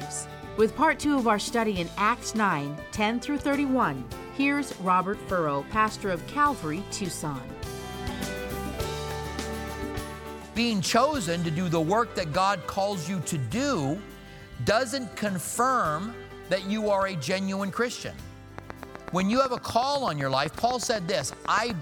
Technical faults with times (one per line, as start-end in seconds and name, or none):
18.58-21.71 train of clicks